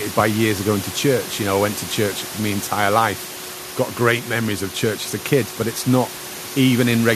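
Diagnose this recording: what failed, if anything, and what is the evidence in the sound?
Nothing failed at any stage of the chain: the only thing under the speech is the room's own background noise, sitting about 16 dB down, which belongs to the recording rather than to the system.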